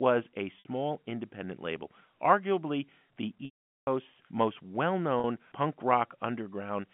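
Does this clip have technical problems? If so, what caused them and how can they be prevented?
Yes. Packet loss with pitch repetition occurs three times. Audio packets failed to arrive, and the receiver filled each gap by repeating the last pitch period. The gaps are at 0.59 to 0.65 s (60 ms, just before "independent label arguably the"), at 3.45 to 3.87 s (420 ms, between "independent label arguably the" and "most well"), and at 5.20 to 5.24 s (40 ms, just after "most well"). The two short gaps sound like a briefly held, buzzy tone. In the long gap the repeated period fades out over about 50 ms, leaving silence until the speech returns with a short cross-fade. The narrow, telephone-like band comes from G.711 coding, which is working as designed. Prevention: give the media traffic priority on the network and use a larger jitter buffer or forward error correction so lost packets are recovered rather than concealed.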